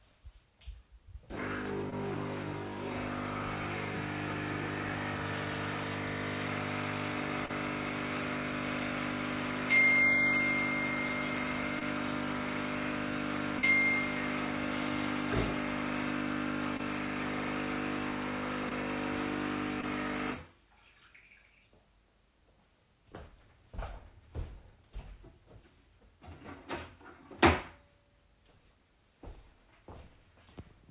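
A short run of sounds with seven spots of short concealed packet loss, at 1.90–1.94, 7.46–7.51, 11.79–11.83, 13.59–13.65, 16.77–16.81, 18.69–18.73 and 19.81–19.85 s. Each time a few tens of milliseconds went missing, and the receiver patched the gap by extending the preceding sound, so you get a brief smear or wobble before it blends back. The audio stops at 4 kHz, which points to G.711 mu-law at 64 kbps on the call path.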